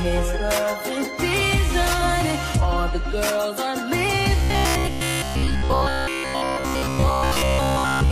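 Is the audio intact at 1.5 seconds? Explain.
Yes, the audio is intact at 1.5 seconds, with no dropout, click, distortion or other fault audible at that point.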